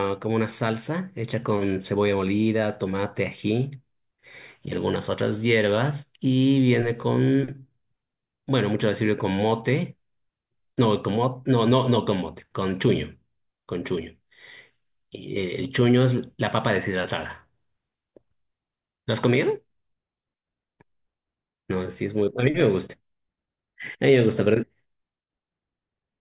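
Nothing stood out as a technical fault on listening to this speech recording.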